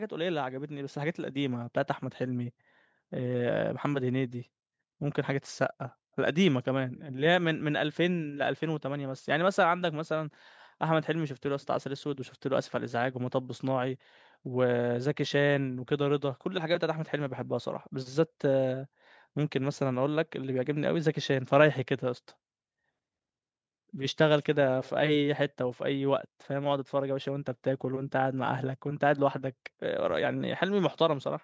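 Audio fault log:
0.24 to 2.61 s, automatic gain rising: across these first two seconds or so the level climbs steadily by about 6 dB, and the speech and the background noise beneath it swell together rather than the voice alone getting louder. The gain control judged the incoming signal too quiet and raised its amplification gradually, so everything in the signal is lifted at once. The bandwidth stays at the call microphone processing's 8 kHz ceiling through the rise.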